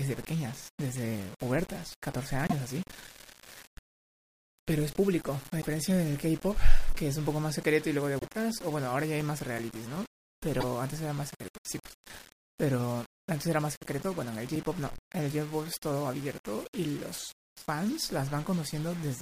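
Throughout the speech, a grainy distortion rides on every sound and thickens as it fades. This is low bit depth without dither, likely rounding to about 7 bits, with error about 20 dB below the signal. Unlike steady hiss, the grit follows the signal.

At 2.47–2.53, 5.61–5.66, 8.19–8.25 and 10.59–10.64 s, the audio skips forward, garbling a couple of 26.1 ms frames. This is a broken MP3 bit reservoir, likely from dropped frames leaving later frames to read another frame's bytes. A plain dropout would go silent instead.

From 8.64 to 10.15 s (9 ticks) and 13.42 to 15.31 s (11 ticks), regular ticks of a few milliseconds recur about six times a second, of uneven strength. These are CD scratch ticks: a blemish hit once per disc rotation, past what error correction can repair. Their steady spacing sets them apart from random clicks.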